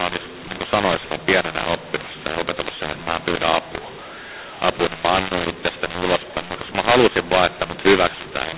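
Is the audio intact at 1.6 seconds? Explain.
No. Throughout the clip, including 1.6 s, mu-law and A-law are mixed up: mu-law samples decoded as A-law scramble levels, giving harsh distortion and noisy pauses. The waveform shows a noise floor lifted well above silence.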